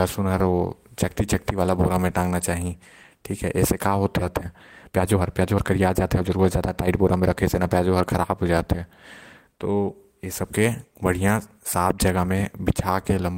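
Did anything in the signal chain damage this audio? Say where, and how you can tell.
Yes. There's a skip ahead at 4.21–4.23 s. Roughly a second of speech vanishes with no gap or fill, which points to the jitter buffer dropping queued audio.

Then from 4.87 to 7.60 s there's a jitter buffer speed-up. Speech runs at 120% with unchanged pitch as pitch periods are trimmed, shedding about half a second of backlog.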